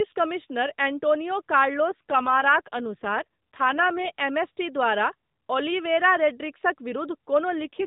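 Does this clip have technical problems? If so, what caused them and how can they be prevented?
Yes. An AMR rate drop occurred: a weak radio link forced the codec down, which fits a step from 12.2 to about 5.9 kbps, so the speech turns rougher and more synthetic at the same bandwidth. This happens from 1.90 to 4.09 s, right after "कमिश्नर एंटोनियो" and before "एमएसटी द्वारा ओलिवेरा रोड्रिग्सक", and again from 7.57 to 7.85 s. Better signal coverage or a wideband or VoLTE call path would keep the codec at its higher rate.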